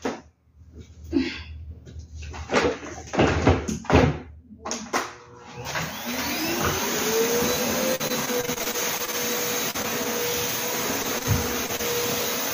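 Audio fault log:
7.95–10.07 s and 11.03–11.81 s: repeated packet loss (robotic sound). The audio turns choppy, with a robotic edge and small pieces dropping out. Packets went missing in quick succession: 15 gaps in the first stretch, the longest 41 ms, and 5 in the second, the longest 25 ms. Each gap was papered over by stretching the preceding sound, so repeated copies replaced roughly 15% and 13% of those spans, and a further 200 ms and 60 ms simply vanished.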